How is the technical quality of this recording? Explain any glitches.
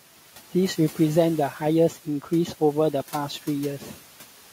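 Two processing faults from noise suppression affect the recording; the room noise, sitting about 19 dB below the speech, is part of the recording and not a fault.

Throughout, the background pumps down between phrases and swells back under speech. These are noise suppressor artifacts: bands judged to be steady noise are pulled down by about 12 dB, frame by frame.

From 3.79 to 3.99 s, a stretch of speech goes faint and swallowed, dipping by up to about 11 dB for roughly a fifth of a second. This is speech cut by the noise suppressor, which mistook that quiet portion for background.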